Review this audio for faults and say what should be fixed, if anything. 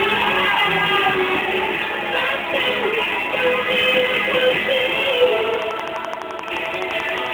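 Sample clock jitter runs through the whole clip. The converter's clock is wobbling by a few microseconds, so each sample lands a touch early or late. That timing error hurts most where the waveform moves fastest, so you get a grainy hiss riding on the louder, brighter passages, sitting roughly 30 dB under the sound and dropping away in the quiet bits. Prevention: clock the converter from a clean, stable source, or use an interface with a decent low-jitter clock.

There's also a train of clicks from 5.54 s to 7.27 s. It's a steady tick at 11.6 per second, about twenty clicks in all, each peaking around 10 dB above the sound, so they're hard to miss. Because the spacing is so even and the clicks all have much the same shape, you hear a regular ticking on top of everything, including the gaps. The likely cause is interference from nearby equipment or a faulty connection or power supply. Prevention: move or shield nearby gear, check grounding and cabling, and check the power supply.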